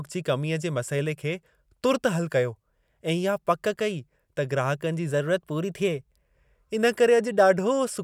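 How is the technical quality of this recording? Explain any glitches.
One glitch stands out in the speech. From 5.11 to 6.28 s, just after "ग्राहकनि जी", a drift correction step speeds playback by 5.5% and raises pitch about 93 cents, then snaps back, likely a clock-matching buffer adjustment; spectrogram harmonics jump upward briefly.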